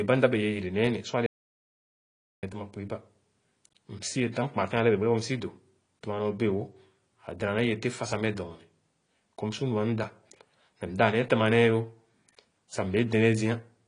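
Across the whole recording the speech carries plainly audible AAC compression damage, likely from AAC-LC coding at a low bitrate, which fits roughly 32 kbps. Unlike a simple low-pass filter, this sounds dull and smeared, with a warbling, fizzy texture on sustained vowels and sibilants.

From 1.26 s to 2.43 s comes an audio dropout to silence lasting about 1.16 s, likely where the input was lost while silence kept being written. It differs from a noise gate in that the cut is abrupt, with no room tone left.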